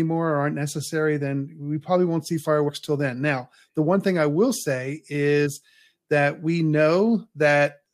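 At 2.68 to 2.70 s, just after "we probably won't see" and before "till then", compressed frames are skipped. About three frames of the encoded speech never reach the output, so roughly 70 ms of audio vanishes. The same fault recurs at 5.45 s, right after "thing I will say". Each time the speech lurches forward.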